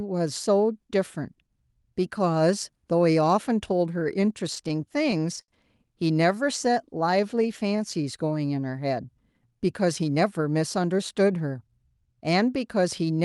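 From 3.99 to 5.51 s the speech shows repeated stalls (stutter): the jitter buffer ran dry ten times as packets arrived late, and each gap, the longest 70 ms, was bridged by extending the preceding sound. About 164 ms was filled in this way and nothing is lost, but delivery drags and catches.

Between 6.15 and 8.04 s a jitter buffer slow-down builds reserve by repeating single pitch periods and pause fragments. This adds 131 ms and brings playback to 93% speed at unchanged pitch, so sounds are drawn out.

From 10.02 to 11.88 s a jitter buffer speed-up does the opposite. Short pitch-period pieces, around 150 ms in total, are cut to shed excess delay. The speech runs at 108% speed with pitch intact and sounds hurried. Throughout, the audio is band-limited near 12 kHz, consistent with an Opus call path.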